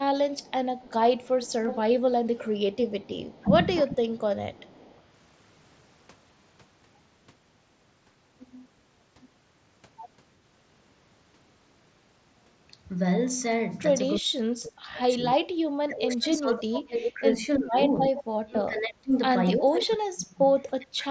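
From 0.3 to 5.0 s, a faint delayed copy of the speech trails it by about 323 ms, around 20 dB down. This is echo leak, likely from a far-end loudspeaker the echo canceller did not fully cancel. The fixed delay sets it apart from room reverberation, which smears rather than repeats.

Between 3.42 and 4.23 s, the speech dips by roughly 15 dB for a total of under half a second. This is speech suppressed in double talk, likely the canceller turning down both sides at once.

From 14.19 s to the end, the same suppression returns far more heavily, with drops of roughly 30 dB across about 5 s.

At 15.04 s, a 7.5 ms gap is filled so smoothly it is nearly inaudible. This is concealed Bluetooth headset packet loss, with the receiver repeating recent waveform instead of leaving silence.

At 17.06 to 17.11 s, a brief echo leak scrap at the same 323 ms delay stands out, only about 5 dB below the speech, likely from the same incompletely cancelled loudspeaker path.

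From 17.96 to 17.98 s, a longer concealed loss of about 15 ms leaves a short buzzy hold with a slight warble as the real audio resumes. That tonal sustain distinguishes it from a plain click or mute.

From 18.16 to 18.24 s, another echo leak fragment at the 323 ms delay sits about 10 dB under the speech, again likely from the uncancelled loudspeaker path.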